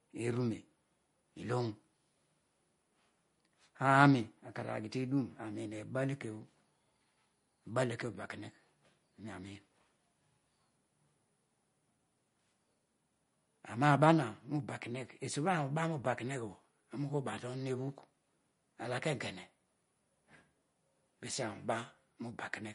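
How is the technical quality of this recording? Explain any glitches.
The speech carries plainly audible coding damage from start to finish, likely from MP3 compression at a low bitrate, around 40 kbps. Nothing sounds above 10.6 kHz, and weak frequency lines flicker between frames, giving a watery swirl and metallic chirps on s sounds. A plain low-pass filter would dull the top without that swirling.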